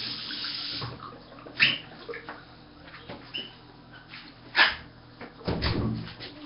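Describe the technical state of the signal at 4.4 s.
At 4.4 s, as through the whole clip, there's a rough, hissy haze over the sound with a smeared, underwater feel, and nothing above about 5.3 kHz. That's likely Nellymoser compression, heavily applied: the coder runs on a tight bit budget fitting roughly 22 kbps, so weak bands get no bits and are filled in with noise.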